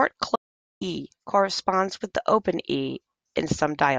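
At 0.36 s the speech cuts out abruptly, and at 0.81 s it returns mid-flow. This is an audio dropout to silence. The gap is silent, with no room tone, and about 450 ms of speech is lost. The input likely disconnected or muted while recording continued.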